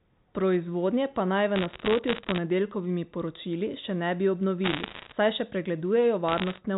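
From 1.56 to 2.38 s, right after "pa naj v", bit errors on a digital phone line scatter sharp ticks over the speech. The denser burst from 4.64 to 5.12 s, between "poročili še ne bi" and "saj še", sounds like crackle, and a lighter patch follows from 6.28 to 6.58 s. Each flipped bit in the G.711 mu-law stream corrupts a single sample, and hits on the sign or high bits produce the loudest clicks.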